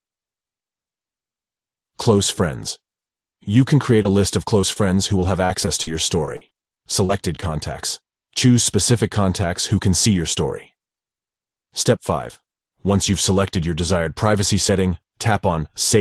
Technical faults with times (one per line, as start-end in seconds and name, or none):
4.02-4.06 short concealed packet loss
4.62-4.77 short concealed packet loss
5.21-5.88 repeated packet loss (robotic sound)
6.26-7.43 repeated packet loss (robotic sound)